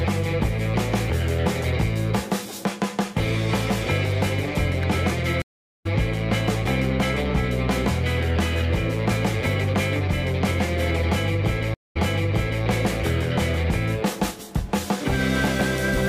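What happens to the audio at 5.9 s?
Silence from 5.42 to 5.87 s, then the audio resumes about 0.4 s further on. This is a stream reconnect: the connection dropped and a fresh decoder restarted mid-stream.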